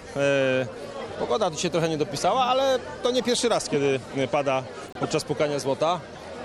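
At 3.73 to 3.78 s, 4.84 to 5.05 s and 6.09 to 6.17 s, a corrupt frame decoded produces chirping bursts of noise. Flipped bits gave the decoder wrong gains and codes, putting energy at the wrong frequencies. The middle burst is the longest and loudest.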